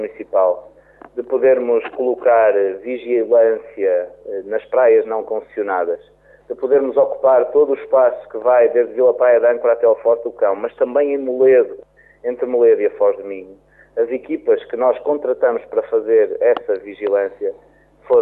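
Nothing in this one trips the ear: no dropouts, clicks or glitches turn up at any point along the way.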